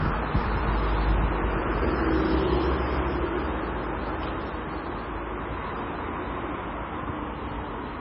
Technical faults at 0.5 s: low-bitrate audio saved at a high bitrate

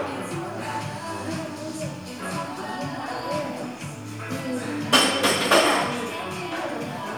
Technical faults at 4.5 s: none

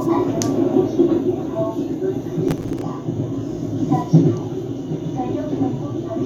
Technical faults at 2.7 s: processor overload crackle

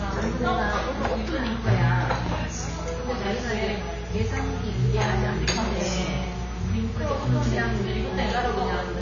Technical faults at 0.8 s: AAC compression

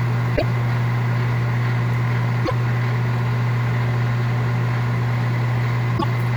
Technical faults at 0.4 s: damaged data in a compressed stream

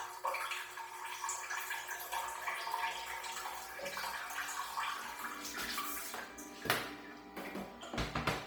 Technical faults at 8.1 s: Bluetooth LC3 compression

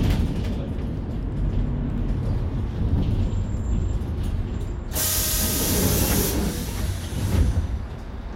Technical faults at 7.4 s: none

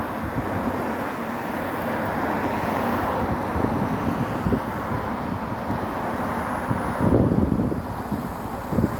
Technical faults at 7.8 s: none

